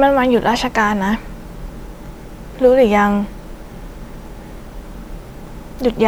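At 2.06 to 2.08 s and again at 4.58 to 4.60 s, the speech jumps with a brief stutter caused by overlapping chunks. The audio was handled in blocks 2.5 s long, and each new block began 20 ms before the previous one finished, so that sliver of sound plays twice at the join. On a waveform, a short stretch repeats with a small discontinuity at its edges. A spectrogram shows a thin vertical seam with duplicated detail beside it.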